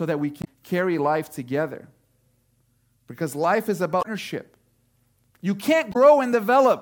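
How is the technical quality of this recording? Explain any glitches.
The speech is marred by three brief glitches from damaged data in a compressed stream, at 0.41–0.47 s (between "that we" and "carry life together"), 3.99–4.06 s (after "life is") and 5.89–5.96 s. Corrupted bytes make the decoder misread frames and lose sync, producing a short chirp, squawk, click or hole.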